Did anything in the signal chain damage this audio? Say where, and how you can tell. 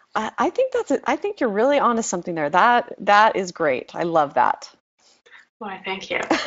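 No, nothing in the chain has damaged this speech. It has passed through the Speex codec at a high setting, which fits a rate of around 28 kbps, and the coding leaves only a light mark on it.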